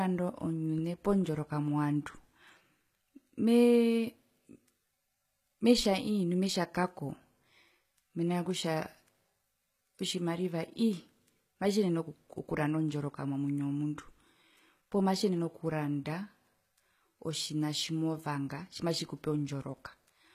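Throughout the speech, s sounds come out gritty and metallic, with plainly audible HE-AAC compression damage, likely from a bitrate near 20 kbps. Unlike a simple low-pass, the treble stays bright up to a cutoff at 14.9 kHz, rebuilt from copied lower bands.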